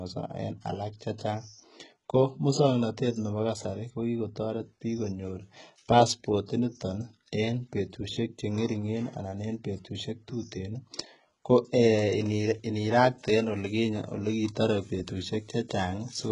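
From start to finish the speech carries heavy HE-AAC compression damage, likely from squeezing it down to something around 12 kbps. The top end is still there up to about 11.1 kHz and then simply stops, but that treble isn't the real thing. It's been rebuilt by copying lower bands upward. Because those copied harmonics don't line up with the ones below, the s sounds come out gritty, lispy and metallic.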